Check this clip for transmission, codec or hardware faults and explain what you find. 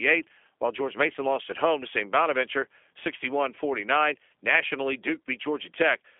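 One fault runs through the whole clip: G.729 codec coloration on this speech, plainly audible from start to finish.

G.729 codec, throughout: the speech has been rebuilt rather than passed through. A low-rate predictive coder models each short frame with a vocal tract filter, a pitch predictor and a handful of pulses, which fits an 8 kbit/s G.729A link. The result sounds rough and slightly synthetic. It is squeezed into a telephone band of about 300 Hz to 3.4 kHz, with nothing at all above 3.5 kHz.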